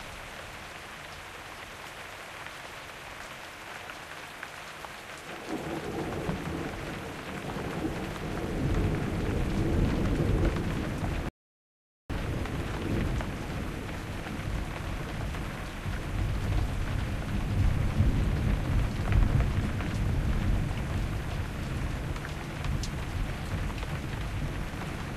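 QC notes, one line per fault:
11.29–12.10 s, rebuffering stall: the sound just drops out to silence for about 0.81 s, then picks up right where it left off. The player ran dry on downloaded audio and waited for more, so nothing's missing, the clip just gets 810 ms longer.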